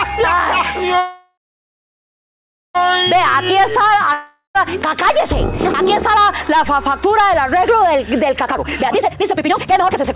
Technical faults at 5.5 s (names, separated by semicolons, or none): none